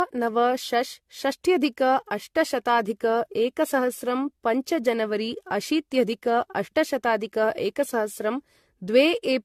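From start to finish the speech has a swirly, hollow, smeared quality, consonant attacks blur, and nothing sits above 14 kHz. That's likely generation loss, around seven lossy passes, fitting a 64 kbit/s AAC-LC chain, each re-quantising on a shifted frame grid.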